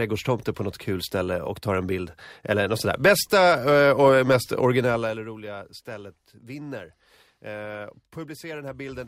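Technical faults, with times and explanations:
4.76–5.32 s, zipper noise: between "och mest" and "stället vinner" the speech drops by roughly 15 dB in discrete unsmoothed steps, around a hundred a second. Each jump in gain puts a tiny click on the waveform, and together they form a buzzy ticking over the fade.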